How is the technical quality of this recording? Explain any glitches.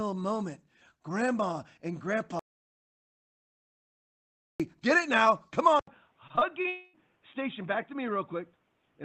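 The recording has four clear faults: a long mute, a drop in input quality partway through, and network damage late in the clip. The whole clip also carries the coding noise of a call codec, consistent with Opus at a low bitrate.

Audio dropout to silence, 2.39 to 4.60 s: the sound stops dead for about 2.2 s and resumes at "get it now come". The gap is silent with no room tone, so the input was most likely lost while the recorder kept writing silence. That material is gone.

Input switched to a poorer device, from 5.79 s to the end: just after "get it now come" there is an 80 ms silence. The sound then turns dull and boxy, with nothing above 3.8 kHz, a level about 5 dB lower, and a new noise floor roughly 40 dB down. This likely indicates a change to a lower-grade microphone or a headset's call profile.

Repeated packet loss (robotic sound), 6.27 to 6.66 s: four short holes, the longest 30 ms, are each patched by stretching the preceding sound. 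About a fifth of this span is synthetic fill, which makes the audio choppy.

Long network dropout, 6.68 to 6.95 s: roughly 0.26 s never arrived, most likely because of a network stall. The receiver filled the whole gap by extending the last sound as a fading buzz or hiss rather than going silent, and the audio picks up afterwards without the lost portion.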